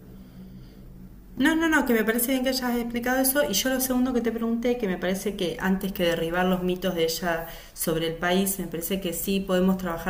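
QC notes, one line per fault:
Nothing to flag on this speech clip; no faults turned up, so there's nothing to log.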